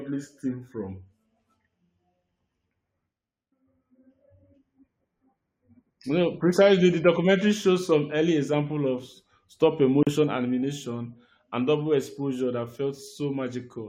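Speech with a gap at a join of encoded pieces at 10.03 s, between "early example of stop" and "animation and double exposure": about 40 ms of silence cuts in, and the speech resumes where it stopped. Separately encoded segments were joined with their encoder start delay and final-frame padding left untrimmed. A spectrogram shows a narrow blank vertical band, and the waveform a flat stretch with smeared edges.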